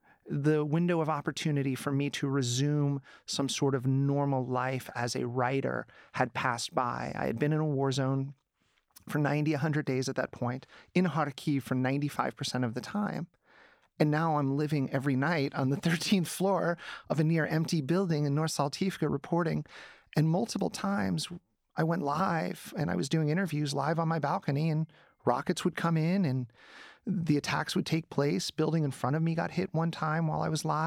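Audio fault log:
No faults detected anywhere in the speech recording.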